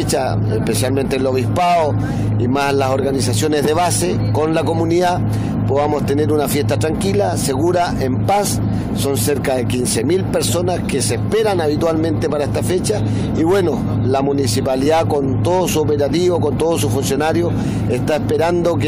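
A brief glitch cuts through the audio at 14.85 to 14.87 s, lasting only about 23 ms. It comes from damaged data in a compressed stream: bytes in that stretch of the encoded file were lost, zeroed or overwritten, so the decoder misread or refused the affected frames, lost its place in the stream, and had to hunt for the next valid frame header before resuming normal playback.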